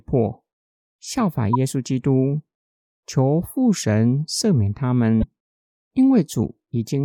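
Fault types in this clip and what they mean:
Damaged data in a compressed stream, at 1.53 to 1.55 s and 5.20 to 5.24 s: corrupted bytes in the encoded speech make the decoder misread those frames and lose sync while it hunts for the next valid header, producing a brief chirp or blip each time.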